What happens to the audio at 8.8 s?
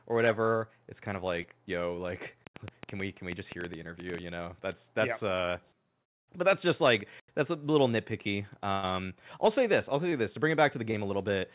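A burst of packet loss runs from 8.72 to 8.87 s. The receiver filled roughly 0.1 s of lost audio by extending the last received sound and fading it, so you hear a held buzz or hiss dying away before the speech jumps ahead with a short piece missing. On a spectrogram, the harmonics or noise stretch out flat and dim, then cut abruptly to new content below the 4 kHz ceiling. The waveform shows repeated, shrinking cycles.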